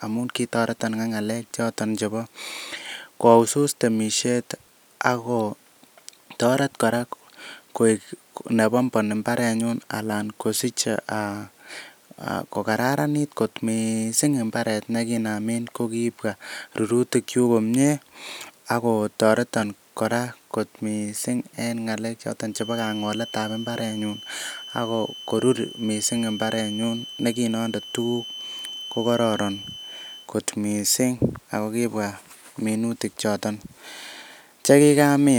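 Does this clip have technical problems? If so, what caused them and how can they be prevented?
Yes: a feedback whistle, a thin steady 3 kHz tone well below the speech, runs from 22.49 to 30.31 s, ending just before "kot miisng ago". It is likely a loudspeaker-to-microphone loop held at the edge of feedback. Unlike a runaway howl, it swells and fades slowly but never grows, and unlike mains hum it sits high, not low. Lowering monitor gain, moving the microphone off the loudspeaker's axis, or notching 3 kHz would prevent it.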